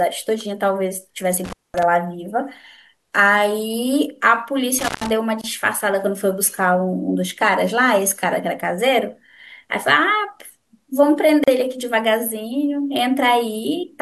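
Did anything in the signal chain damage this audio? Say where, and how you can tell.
Yes. In the analogue wiring, the speech drops out twice with a crackle on either side: from 1.44 to 1.83 s, where the line is open for about 215 ms, and from 4.79 to 5.11 s, open for about 133 ms. During each dropout faint hiss remains. This is intermittent contact. A loose plug or cable conductor briefly breaks the circuit, and the make-and-break at each edge produces the crackle.

At the codec stage, there are short silences with smeared edges at 5.41 s (25 ms) and 11.44 s (37 ms), spaced exactly 6.0 s apart. Afterwards the speech resumes exactly where it stopped. Nothing is missing; the silence is inserted. That is a gap at a join of encoded pieces. The audio was encoded in 6-second segments and concatenated without trimming, so each segment's start-up delay and padded final frame stay in as silence, and the codec softens the edges.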